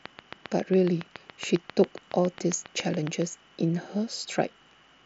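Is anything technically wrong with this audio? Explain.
Yes, two faults are audible.

From 0.06 to 3.23 s there is a train of clicks: about 20 sharp, near-identical pulses at a steady rate of about 7.3 per second, peaking roughly 10 dB above the speech. The likely cause is electrical interference from nearby equipment or a faulty connection or power supply, injecting the same spike repeatedly. The clicks are heard as regular ticking over the speech and in its pauses, well above the program level.

At 4.06 s there is a concealed Bluetooth headset packet loss, a 7.5 ms gap that fits one dropped packet between headset and phone. The receiver filled the hole by continuing the waveform with the closest-matching piece of the preceding audio. Because only one packet went missing, the patch is nearly hidden.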